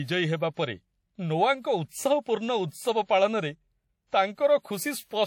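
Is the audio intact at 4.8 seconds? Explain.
No, at 4.8 seconds the speech carries what is likely WMA compression, present across the whole clip rather than at that moment alone. A transform codec with long blocks spreads its quantisation noise over tens of milliseconds and drops weak spectral lines, so the speech sounds ringing and washy, with hiss that breathes with the signal. The damage is plainly audible, which points to a low bitrate near 48 kbps. Nothing is present above 19.5 kHz.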